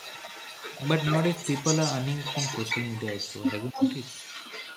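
A speech recording with a faint second copy of the speech running underneath it from start to finish, trailing the original by about 0.28 s and sitting around 10 dB lower. That fixed delay and the distinct, recognisable repeat mark it as an echo leak rather than room reverberation, which would smear into a diffuse tail instead of returning as a separate copy. The likely cause is a loudspeaker at the far end whose echo canceller let part of its microphone pickup travel back down the line. At 3.72 to 3.8 s the speech itself briefly sinks, by around 15 dB at its deepest, for less than a tenth of a second. This points to speech suppressed in double talk: with both sides active, the canceller likely mistook the talker for echo and pulled the level down. A packet-loss dropout would differ, because it usually cuts to silence or a smeared fill rather than a shallow, level-based dip.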